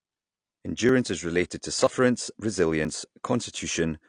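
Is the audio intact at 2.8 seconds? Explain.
No. At 2.85 s there is audio missing between chunks: roughly 20 ms is skipped and the two sides are butted together with no gap. This likely comes from a recorder handing over from one block to the next. Unlike a dropout, it leaves a jump rather than a silence.

The AAC compression damage runs through the whole clip and is plainly audible. Nothing is heard above about 9.8 kHz, and the quantised spectrum leaves a smeared, warbling texture, which a simple low-pass filter would not add. This likely comes from a low bitrate, consistent with around 32 kbps.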